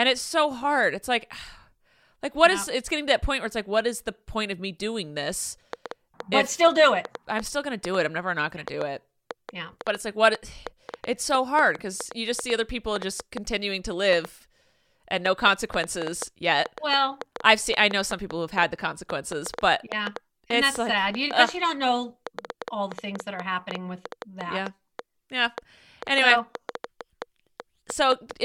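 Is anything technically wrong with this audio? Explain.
Yes. A train of clicks runs from 5.73 s, just after "of me doing this", to 28.32 s. Around a hundred similar ticks arrive unevenly, averaging 4.4 per second. They stand well above the speech, pauses included. Nearby interference or a faulty connection or power supply is likely injecting the pulses.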